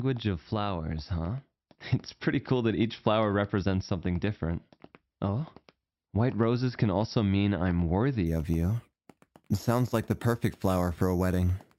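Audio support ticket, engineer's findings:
Bright metallic fizz from 8.26 s to end of clip (11.78 s). Imaging from sample-and-hold upsampling, 12 kHz to 48 kHz, each sample repeated with no smoothing filter. Lowest mirror band 6 to 12 kHz, about 24 dB below the signal. Fizz level tracks the sound, unlike steady hiss. Image moves opposite to the pitch, which separates it from harmonic distortion.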